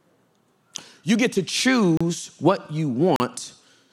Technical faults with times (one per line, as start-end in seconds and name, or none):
1.97-2.01 block of digital silence
3.16-3.20 block of digital silence